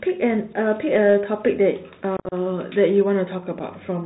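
A speech recording that has passed through a Bluetooth CVSD headset codec, which fits a 64 kbps narrowband link coding one bit per sample and only signalling whether the waveform rises or falls. Nothing above 4 kHz survives, and its adaptive step cannot keep pace with loud, high-frequency energy, so sibilants come out scratchy, strong high sounds break up, and a grainy hiss sits under the voice throughout, with the codec damage plainly audible. The link also suffers unconcealed Bluetooth headset packet loss. Between 2.17 and 2.34 s, around fifteen packets drop out, about 112.5 ms of audio missing across a 150 ms stretch, the longest hole 52.5 ms. Nothing fills the gaps, so the speech there turns choppy and crackly, with hard-edged cuts and a brief dip in level as the CVSD decoder recovers. A single lost packet at 3.59 s leaves one 7.5 ms hole.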